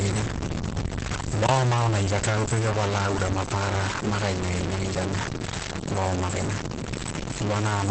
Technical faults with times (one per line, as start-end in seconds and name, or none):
0.00-7.91 stuck bit
0.00-7.91 Opus voice compression
1.47-1.49 block of digital silence
6.82-6.84 block of digital silence